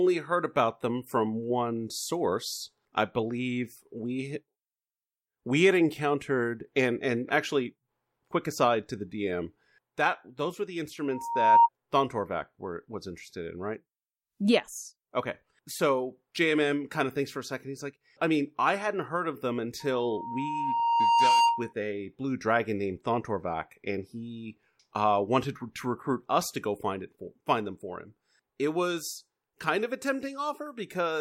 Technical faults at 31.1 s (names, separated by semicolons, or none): none